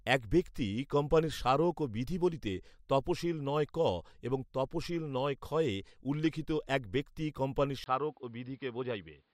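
At 7.84 s the speech drops out for about 20 ms and resumes with a different character through to the end: the top end is gone above 5.2 kHz, so the sound turns duller and boxier, the level falls by roughly 5 dB, and a new background noise appears, roughly 45 dB below the signal. This abrupt change in bandwidth, level and noise floor is most likely an input switched to a poorer device partway through the recording.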